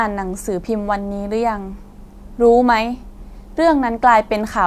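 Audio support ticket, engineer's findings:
No technical faults found on the speech signal: level, continuity and timing hold steady throughout, with nothing pointing to a problem in the capture, processing or transport chain.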